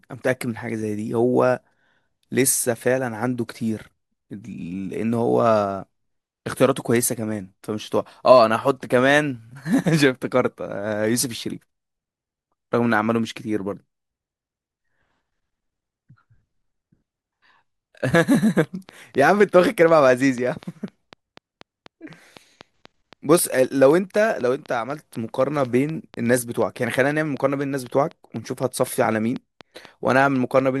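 From 18.64 s to 30.61 s, a train of clicks ticks at a steady 4 per second, about as loud as the speech, likely from nearby electrical interference.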